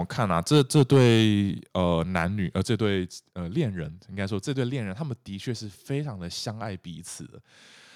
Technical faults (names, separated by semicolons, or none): microphone overload; microphone volume stepped down